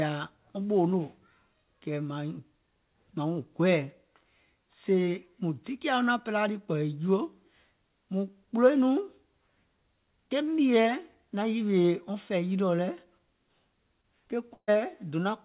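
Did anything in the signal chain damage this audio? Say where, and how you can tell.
Yes, the network leg of the call did, in two ways. First, short concealed packet loss at 11.82 s, right after "ke mìèɛ naŋ" and before "wɔŋ fɛ̀ì yilìɔ lɛ̀", and again at 14.02 s. Each is about 20 ms of audio that didn't arrive in time. The receiver papered over it by extending the preceding sound, so you hear a quick smear or wobble instead of a clean gap.

Then there's a burst of packet loss at 14.54 s. About 140 ms went missing in a row. Concealment stretched the last sound into a held buzz or hiss and faded it, with roughly 60 ms dropping to silence before the audio picks up again further along. Whatever came in that stretch is simply gone. The call codec looks like G.711 mu-law, with nothing above 4 kHz.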